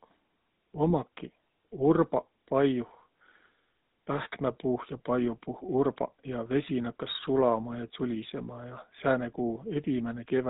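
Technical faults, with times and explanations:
Throughout: GSM full-rate codec. The speech has a buzzy, gravelly roughness that is plainly audible. Nothing above 4 kHz gets through, so the sound is dull and narrow. The codec rebuilds the voice from a vocal-tract filter driven by regularly spaced pulses. Only every third excitation sample survives, and that coarse excitation causes the grit. The quality fits the old 13 kbps GSM full-rate mode.
0.90 s and 8.96 to 9.02 s: GSM bit errors. Each spot is a brief squawk or pop that breaks the speech. The first is a tiny click-like glitch. The second is longer, a short gargle. Corrupted bits reached the decoder and garbled the filter, pitch or gain values. For two or three frames, the spectrum bends or the level jumps. The second hit sounds like a denser burst of errors spanning a few frames.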